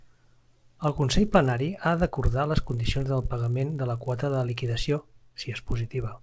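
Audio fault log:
Throughout, resampler restarted on every block: each 20 ms block was converted in isolation, which fits a 24 kHz to 16 kHz change, leaving a small error at every block edge; the errors repeat at 50 Hz and are heard as a buzz riding on the speech whenever it is present.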